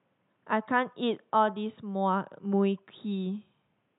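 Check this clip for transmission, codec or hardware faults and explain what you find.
No faults can be heard in this speech recording.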